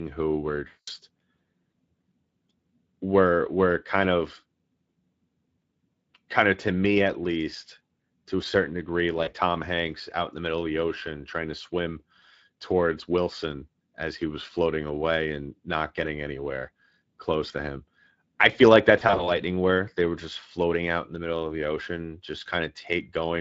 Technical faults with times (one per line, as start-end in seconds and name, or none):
0.00-23.40 Speex codec
0.67-0.90 VoIP packet loss concealed by the speech codec
9.23-9.32 VoIP packet loss concealed by the speech codec
18.99-19.31 VoIP packet loss concealed by the speech codec